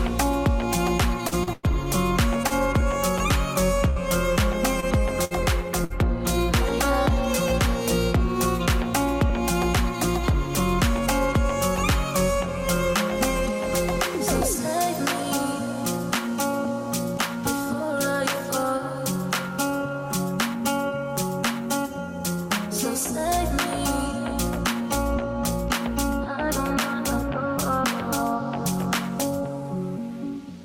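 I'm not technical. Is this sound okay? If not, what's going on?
No. Between 1.27 and 5.93 s there is repeated packet loss, which gives a robotic sound. Small chunks of the audio went missing or arrived too late, again and again. Each time, the receiver filled the hole by stretching out the last bit of sound it had. That covered roughly a tenth of the stretch, with the longest hole about 0.1 s. You hear choppy sound with bits dropping out.

Later there are two moments of jitter buffer speed-up. The receiver had built up more stored audio than it wanted, so it quietly cut out tiny slivers to catch up, about 40 ms in total each time. From 12.35 to 15.44 s the sound runs about 1% fast, which is barely noticeable. From 29.41 to 30.34 s it runs about 4% fast. The pitch stays the same in both.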